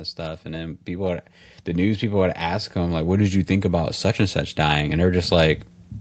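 A speech clip whose level climbs steadily from 0.16 s to 5.6 s as automatic gain rising takes hold: the gain control judged the input too quiet and kept pushing its gain up, by about 11 dB overall, so the voice and the background noise swell together. On a waveform the envelope widens gradually across that span, and a spectrogram shows every band, noise floor included, brightening in step. Nothing appears above 8 kHz, consistent with the call's Opus coding.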